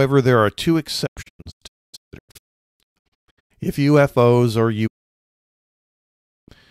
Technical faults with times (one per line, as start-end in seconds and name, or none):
1.05-3.52 digital broadcast dropout
4.86-6.50 digital broadcast dropout